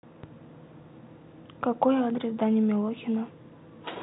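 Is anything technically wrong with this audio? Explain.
No, there's nothing wrong here: the speech comes over a G.726 ADPCM link at 40 kbit/s, so it stops at about 3.9 kHz as that telephone path normally would, and any coding grit it leaves is faint at most.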